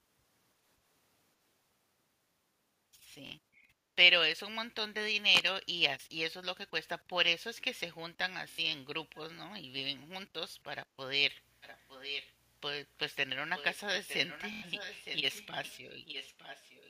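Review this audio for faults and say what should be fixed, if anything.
Bluetooth stutter at 3.27 to 3.31 s, 8.51 to 8.59 s and 14.53 to 14.62 s: late or lost wireless packets made the receiver replay its last buffer, giving a brief buzzing stutter over gaps of 46, 70 and 93 ms. Keeping the device closer to the receiver with fewer radio obstructions would prevent this.

Cable scratch noise from 5.29 to 5.53 s: a worn connector or cable being moved likely changed contact resistance rapidly, adding a scratchy burst about 5 dB below the speech. Replacing or reseating that cable would fix it.

Background gated by the echo canceller, 11.45 to 11.58 s: the canceller clamped the microphone while the loudspeaker played, dipping the room sound by about 6 dB for roughly a tenth of a second. Gentler suppression settings would avoid this.

Echo leak at 11.61 to 12.34 s, 13.56 to 13.78 s, 13.96 to 15.47 s, 15.64 to 15.72 s and 16.05 to 16.89 s: the far side's canceller likely failed to remove its loudspeaker pickup, sending back a copy of the speech delayed by 914 ms at about 10 to 20 dB down. 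A headset on that end, or a better-tuned canceller, would stop it.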